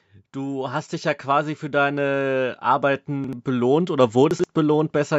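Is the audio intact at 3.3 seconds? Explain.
No. From 3.24 to 3.33 s there are chunks out of order. A block of about 43 ms arrived one chunk late and was played after the block that should follow it. Nothing is missing, but the sound briefly jumbles at three hard joins. On a waveform these show as abrupt discontinuities. On a spectrogram they appear as thin vertical broadband lines, with the harmonic traces jumping out of sequence between them.

The same moment also falls inside a stretch of automatic gain rising, which runs from 0.1 to 4.99 s. Finding the input too quiet, the gain control keeps lifting its level, by about 11 dB over the whole stretch. The voice and the background swell together rather than the voice alone getting louder. On a waveform the envelope widens steadily from left to right. On a spectrogram the whole picture, including the noise floor between syllables, grows gradually brighter.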